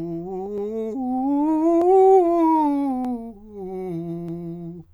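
It's a short piece of music, and what's wrong is a regular tick: about four clicks spaced 1.24 s apart, running from 0.58 s to 4.29 s. That steady spacing is the giveaway for clock drift buffer slips. Two devices are likely running on separate clocks a few hundred ppm apart, so the buffer between them creeps until a small block of roughly fifteen samples gets dropped or repeated, and each slip lands as a click.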